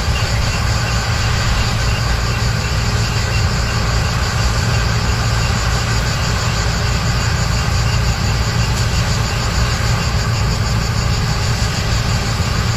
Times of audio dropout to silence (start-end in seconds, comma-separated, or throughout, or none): none